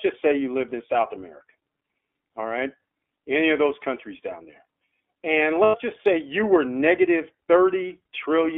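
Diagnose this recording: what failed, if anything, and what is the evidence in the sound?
The codec stage shows an iLBC codec throughout. The speech sits in a narrowband line of roughly 250 Hz to 3.5 kHz, with nothing above 4 kHz, and carries a plainly rough, synthetic texture. A plain band-limited line would sound dull but smooth. This grittiness comes from coarse excitation coding, which fits iLBC's 15.2 kbps mode with 20 ms frames.

At the network stage, lost iLBC frames appear from 5.64 to 5.76 s. For about 100 ms, which fits five 20 ms frames, the speech becomes a held, slightly buzzy vowel as the decoder repeats the last pitch cycle mixed with noise. A buffer underrun would leave silence or a click instead. Recovery is immediate because each iLBC frame decodes independently.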